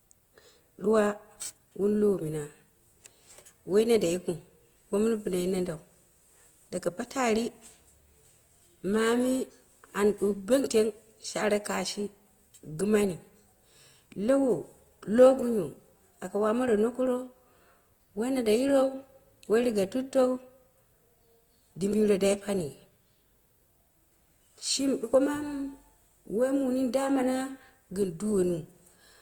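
Throughout the speech, tones turn grainy and rough, with a noisy texture where the bands were filled in rather than left empty, and the sound still reaches up to about 20.1 kHz. This is likely Opus compression in its music mode, which fits a rate near 24 kbps.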